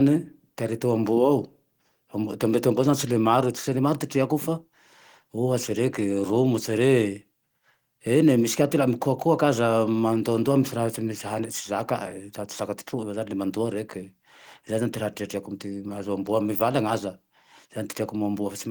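Nothing stood out on listening to the speech in this recording.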